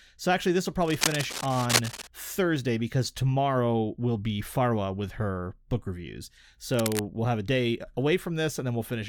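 Cable scratch noise rasps over the speech from 0.82 to 2.07 s, fairly loud, then briefly from 6.74 to 7.03 s, quieter, likely a worn connector being jostled.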